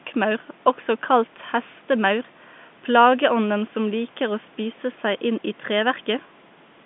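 Nothing stood out on listening to this speech clip, which carries the narrow, band-limited sound of a telephone line.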